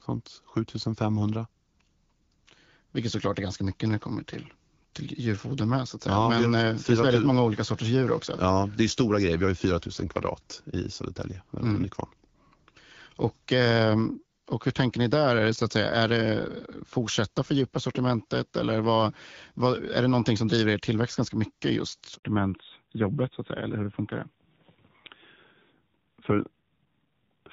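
Right after "tillväxt ganska mycket just", at 22.15 s, there's a handover gap: the call switched networks, no frames arrived, and the speech drops out completely for about 80 ms. From 22.23 s to the end, it's a fallback to narrowband. The clean HD Voice sound, which fits AMR-WB at around 12.65 kbit/s, gives way to a duller, rougher voice with nothing left above 4 kHz.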